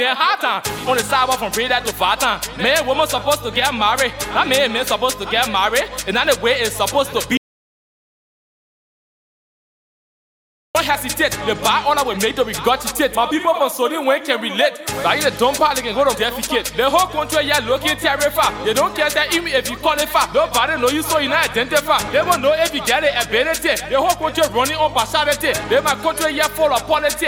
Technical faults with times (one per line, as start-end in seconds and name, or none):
7.37-10.75 audio dropout to silence